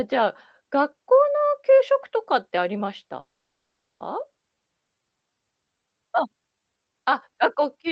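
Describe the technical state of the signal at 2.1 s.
At 2.1 s the speech is intact, with nothing there beyond the ordinary band-limited character of a call codec.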